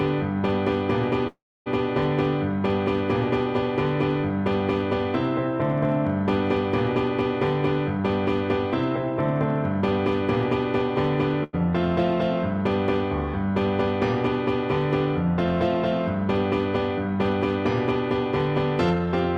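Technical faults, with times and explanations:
Throughout, hard clipping: the signal overdrives a stage by about 6 dB, so roughly one percent of samples are cut flat, adding crackle on loud moments.
1.27 to 1.68 s, call audio freeze: packets were likely held up and the buffer ran dry; the last sound fades into about 0.29 s of silence, then resumes with nothing lost.
11.44 to 11.55 s, short stall from a late packet: the buffer emptied while a packet was late, so the last sound is stretched about 94 ms, then continues unbroken.
18.90 to 19.07 s, jitter buffer speed-up: the receiver trimmed about 100 ms of surplus buffered audio in short pieces, so the sound runs at about 165 percent speed, hurried but unchanged in pitch.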